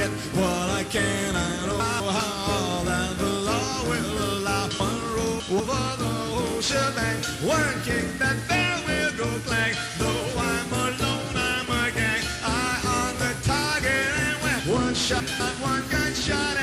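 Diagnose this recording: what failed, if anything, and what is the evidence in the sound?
The fault is chunks out of order, at the buffer or reassembly stage. At 1.8 to 2.2 s, a 200 ms block plays one slot late, swapped with its neighbour. At 4.8 to 5.6 s and 14.6 to 15.4 s, a block lands three slots late. Each spot sounds jumbled, with hard joins. No audio is missing. The sequence is simply wrong, which fits blocks written or queued in the wrong order.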